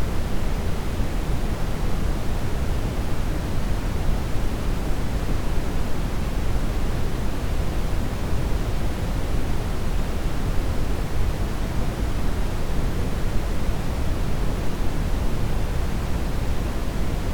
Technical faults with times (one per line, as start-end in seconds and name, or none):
none